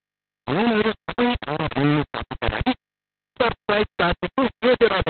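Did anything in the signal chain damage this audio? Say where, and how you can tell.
Yes. At the sample-format conversion stage, the signal was likely reduced to about 3 bits by plain rounding with no dither. The speech is coated throughout in a coarse, grainy distortion that moves with the voice, and the error is nearly as loud as the speech itself. Quiet stretches collapse to silence or sputter between a couple of levels. With so few steps, every waveform gets forced onto a crude staircase, and the error tracks the signal instead of sitting underneath it as a steady hiss.

The second fault is Opus voice compression at the codec stage. Nothing remains above 4.3 kHz for the whole clip, so the speech is narrowband and muffled. It also sounds hoarse, with a slightly robotic quality. The encoder ran in its SILK linear-prediction mode. The heavy damage points to a very low bitrate, around 6 kbps, with long 60 ms frames. 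At that rate the excitation is coded so coarsely that the natural texture of the voice is lost.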